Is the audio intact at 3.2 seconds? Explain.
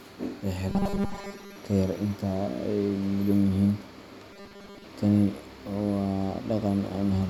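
Yes, the speech at 3.2 seconds is intact, with no fault heard at that moment.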